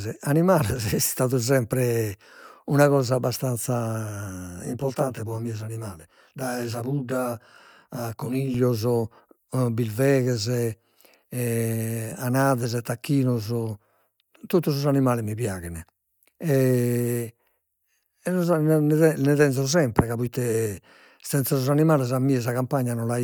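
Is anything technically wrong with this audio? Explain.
Yes. After "sempre una cosa abbastanza", from 4.65 to 8.54 s, channel delay (comb filtering): one channel lags by roughly 20 ms, and the mono sum cuts fixed notches from about 30 Hz upward. The speech turns rough and slightly doubled, and unlike flanging the notches never sweep.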